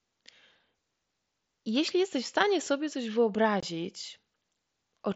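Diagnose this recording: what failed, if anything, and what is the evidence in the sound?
The wireless link between headset and phone failed briefly, causing unconcealed Bluetooth headset packet loss. At 3.60 to 3.63 s the speech drops out for about 22.5 ms, which fits three consecutive 7.5 ms mSBC frames lost in transit and replaced by silence rather than concealed. The hole has hard edges. On a waveform it shows as a flat gap with vertical walls, and on a spectrogram as a clean blank column.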